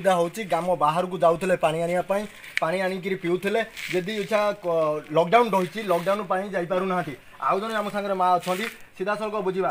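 No technical faults can be heard anywhere in this audio.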